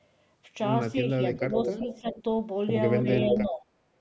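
From 1.01 to 2.24 s the speech dips in patches totalling about half a second, down by roughly 10 dB at worst. This is likely speech suppressed in double talk: the echo canceller, faced with both sides talking, turned everything down. Shorter dips follow at 3.03 to 3.07 s (about 5 dB) and 3.24 to 3.64 s (about 15 dB).

Overlapping these, at 1.54 to 2.23 s and 3.28 to 3.44 s, a copy of the voice returns 361 ms late. The likely cause is an echo leak, where loudspeaker sound reached a microphone and was not fully cancelled. The copy sits about 5 dB below the speech in the first stretch and about 5 dB above it in the second.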